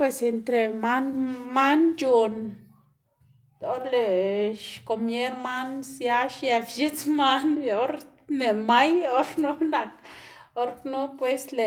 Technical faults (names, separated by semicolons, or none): none